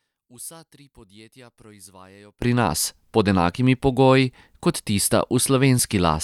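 From the start to about 2.42 s, the speech drops by about 25 dB and turns faint, with the centre nearly gone. That's most likely one channel inverted, so the two sides cancel each other when summed.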